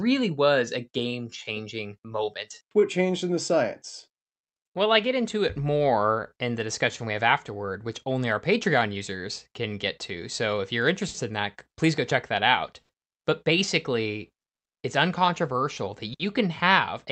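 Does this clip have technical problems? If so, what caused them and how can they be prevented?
Yes. The speech has a clock drift between sender and receiver. The sender's clock runs about 4% slow. The receiver's jitter buffer keeps draining, so it must stretch and repeat audio to fill the gaps. This produces the hiccups below. Locking both ends to a common clock, or using adaptive resampling at the receiver, prevents it.

Repeated timing corrections run from 0.18 to 10.56 s, ending just before "if you're". Playback runs at 96% speed and adds roughly 0.4 s. A second run spans 12.48 to 15.85 s, after "please go check that". It runs at 98% and adds about 70 ms. Smooth resampling, rather than inserting pieces, would hide these corrections.

A short stall from a late packet occurs at 11.08 to 11.17 s, between "if you're" and "in that please go". Two more occur at 12.83 to 12.92 s and 16.14 to 16.23 s. 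Each time the buffer ran empty, and 60 ms was filled by holding the last sound. Nothing is lost, but a sound drags briefly. A slightly deeper jitter buffer prevents these stalls.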